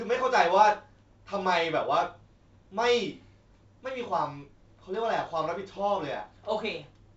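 No technical faults can be heard in the speech, which is carried by G.722 wideband telephone coding at 64 kbit/s, with the band up to 7 kHz present and any trace of the coding faint at most.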